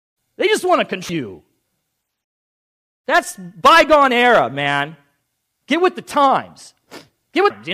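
Damaged data in the compressed stream of this speech clip throws the decoder out of sync three times, each time leaving a brief chirp or blip: at 1.09 s after "just want to", at 3.23 s before "bygone era man", and at 7.50 s.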